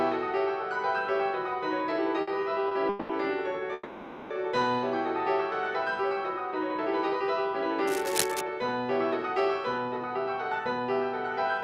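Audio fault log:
2.21–3.11 s, repeated stalls (stutter): four gaps, longest 200 ms, filling about a third of the span; late packets emptied the jitter buffer repeatedly, so sound drags.
3.73–4.32 s, call audio freeze: 570 ms hold where the last sound is extended then resumes intact, likely from packets delayed in transit draining the jitter buffer.
7.87–8.41 s, cable scratch noise: dense, uneven scratching bursts roughly 5 dB below the signal, likely a worn cable or connector being moved.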